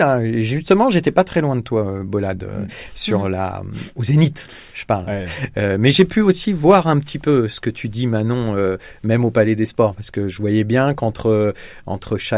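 Nothing technically wrong turns up anywhere in this speech recording, so there's no fault to point to and no time or cause to report.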